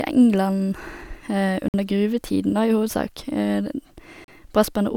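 Held-up radio packets likely starved the headphones' buffer twice, producing a Bluetooth stall each time: playback halted while the link waited for resent data, then carried on. In this speech, the first dropout runs from 1.68 to 1.74 s, a gap of about 55 ms of silence, and the second from 4.24 to 4.28 s, about 37 ms. Each sounds like a brief hard cut to nothing before the voice resumes.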